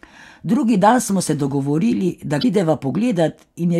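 Damaged data in the compressed stream knocks the decoder out of sync from 2.39 to 2.45 s, after "smo se dogovorili da", leaving a brief glitch.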